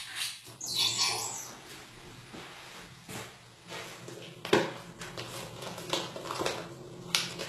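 From start to finish the treble has a gritty, metallic sheen, and nothing reaches above about 12.3 kHz. This is likely HE-AAC compression at a very low bitrate, something near 16 kbps. The codec keeps only the lower band and fakes the top by copying it upward, so the damage is plainly audible. Unlike a plain low-pass, which would sound dull, the treble here stays bright but sounds gritty, with harmonics that don't line up.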